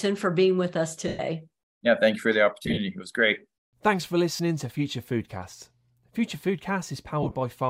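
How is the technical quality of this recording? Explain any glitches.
The recording has four dropouts from lost LE Audio frames, at 1.08 to 1.19 s, 2.62 to 2.79 s, 4.36 to 4.40 s, and 7.23 to 7.35 s. The second and last are scattered bursts, with the longest gaps around 40 ms and 20 ms. When the link drops frames, which are 7.5 ms chunks, the LC3 decoder fills in by repeating the last spectrum with scrambled phase. The speech turns into a brief noisy smear, and the 112 ms gap at 1.08 s starts fading toward silence. The light codec compression underneath shows at most as a faint watery texture on noise and attacks.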